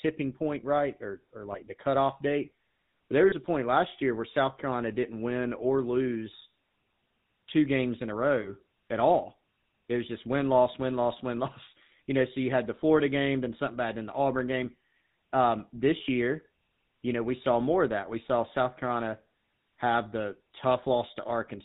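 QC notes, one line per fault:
Throughout, GSM full-rate codec: the whole clip carries that plainly audible buzzy, gravelly edge, since the codec rebuilds the voice from a vocal-tract model fed by sparse regular pulses. Nothing gets through above 4 kHz, and the 13 kbps budget sounds it.
1.52 s, 3.28 s and 8.42 s, lost GSM frames: three short dropouts of roughly 20 to 40 ms where the decoder repeated the last good frame, so the sound briefly smears into a rough, metallic ring before picking up again.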